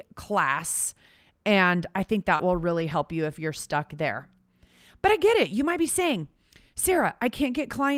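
A brief smeared wobble at 2.35 to 2.41 s marks short concealed packet loss in this speech recording. About 40 ms of audio never arrived in time, so the receiver extended the preceding sound to cover the hole and then blended back into the real signal, which leaves a slurred patch where a short sound may be swallowed. Three 20 ms stretches sound momentarily rougher and noisier without any gap: one at 2.39 to 2.41 s, just after "I think", overlapping the end of that concealed span, and two more at 2.69 to 2.71 s and 2.79 to 2.81 s, just before "help you if you're". These are lost packets rebuilt from error correction. Each missing packet was replaced by the low-bitrate copy carried in the packet that followed it, Opus in-band forward error correction, so playback stays continuous but those frames come out coarser than the audio around them.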